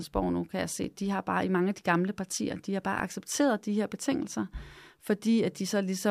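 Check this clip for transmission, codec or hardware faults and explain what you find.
Two repeated-buffer faults occur in this speech, at 0.84 s after "nu kan jeg" and at 2.99 s after "partier de har bare". Late audio made the device replay a 1.33 ms piece, which fits a 64-sample buffer: once, then three times. Each is heard as a click or brief buzz, showing as hard waveform joins and a thin vertical spectrogram stripe.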